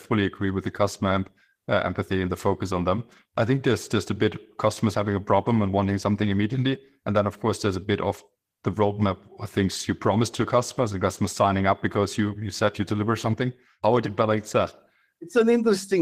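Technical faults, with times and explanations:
No technical faults are audible anywhere in this speech recording; the signal stays continuous throughout.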